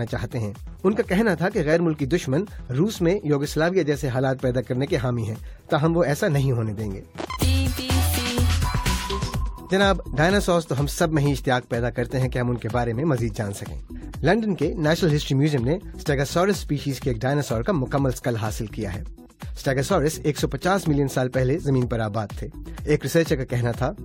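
No technical faults can be heard anywhere in this audio.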